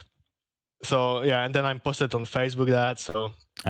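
At 2.21 to 2.26 s there is a short concealed packet loss. About 20 ms of the speech stream failed to reach the decoder in time, so the receiver bridged the hole by extending the sound it had just played for roughly 21 ms and then crossfading back into the arriving audio. The patch is brief, so it comes across as a small smear or flutter in the speech rather than an audible gap.

At 3.10 to 3.16 s comes a burst of packet loss. A run of data went missing or arrived too late to be played, taking out about 40 ms of the speech. The receiver kept the preceding sound going for about 45 ms while fading it down, then resumed at a later point, so the speech briefly turns into a decaying, static continuation of itself before jumping ahead with a slice of it gone.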